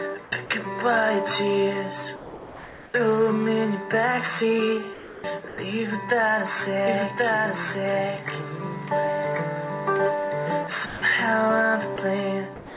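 At 0.24 to 0.32 s, comfort noise stands in place of the background for 80 ms. The real background gives way to a flat, featureless hiss, about 4 dB quieter. The likely cause is discontinuous transmission. The sender stopped sending during a pause, and the receiver filled the gap with synthetic noise shaped roughly like the room. The detail of the true background is gone until sound resumes.

Sound dropped by the voice detector follows at 0.46 to 0.50 s. It recurs at 2.16 to 2.94 s, 4.94 to 5.24 s and 5.48 to 5.58 s. Each time, real sound is cut and steady noise or near silence plays instead. The longest loss is near 2.2 to 2.9 s, where almost half a second of sound vanishes. The likely cause is a detector that misread quiet sound as background and paused sending.

From 6.87 to 10.67 s there is a doubled audio track. A second full-band copy runs about a second behind and is about as loud as the original. 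It has no decay and no room colour. It starts and stops abruptly, so everything is heard twice, out of step. The likely cause is a second capture path or an edit that left two copies overlapping.

Sound is dropped by the voice detector again at 10.86 to 11.02 s, 11.96 to 11.98 s, and 12.56 s through to the end. Steady noise or near silence replaces the lost sound each time. Throughout, nothing is heard above 4 kHz. That fits the narrowband G.711 A-law call path.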